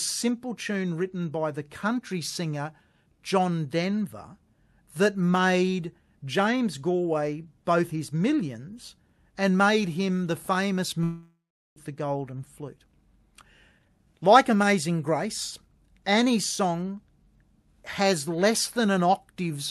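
From 11.03 to 11.78 s the audio drops out, likely from a long network dropout. The last sound trails off as a fading buzz or hiss into about 390 ms of silence, and roughly 400 ms never comes back.

Then the jitter buffer speed-up kicks in to shed around 350 ms of built-up delay. At 12.32 to 12.85 s the sound runs at 108%, and at 13.71 to 15.26 s it runs at 116%, hurried but at the same pitch. The Opus call path tops out around 12 kHz, at a 64 kbps setting.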